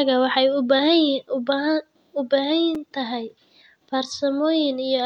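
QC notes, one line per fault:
2.75 s, block of digital silence: a 5 ms run of samples drops abruptly to near silence, heard as a tick; the waveform goes flat, with a thin broadband stripe on the spectrogram.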